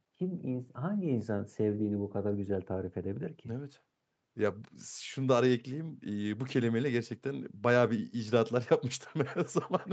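No technical faults are audible.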